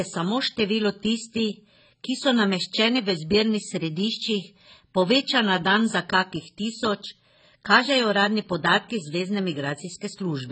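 AAC compression damage runs throughout the speech: nothing reaches above 8.5 kHz, so the sound is dull and smeared, with fizzy, warbling sibilants. The likely cause is heavy AAC-LC coding that starves the spectrum of bits, which fits a bitrate around 16 kbps.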